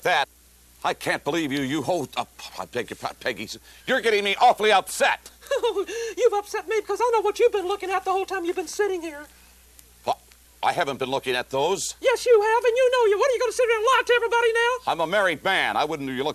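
Nothing here sounds wrong from a technical standpoint, so there's nothing to flag anywhere in the recording.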